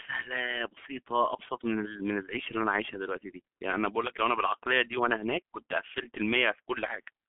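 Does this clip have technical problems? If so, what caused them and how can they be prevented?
Yes: the whole speech clip carries heavy G.723.1 codec damage, muffled above 3.4 kHz, hoarse and smeared by coarse 30 ms frames at around 6.3 kbit/s. Use a wideband codec instead.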